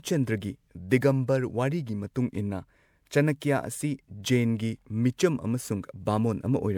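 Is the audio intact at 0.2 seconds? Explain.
No. Generation loss runs through the whole clip, including 0.2 s, likely from about five rounds of 128 kbit/s MP3 encoding, each re-quantising on a shifted frame grid, leaving the speech swirly, hollow and smeared, with blurred attacks.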